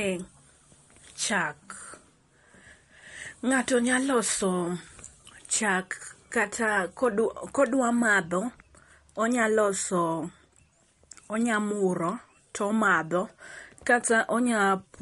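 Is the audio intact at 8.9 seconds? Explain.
No. At 8.9 s, as across the whole clip, nothing is audible above 11.2 kHz, and the sound has a plainly watery, swirling quality. This is likely MP3 compression, at a bitrate that fits roughly 48 kbps: starved of bits, the encoder cuts the treble and drops weak frequency detail frame by frame.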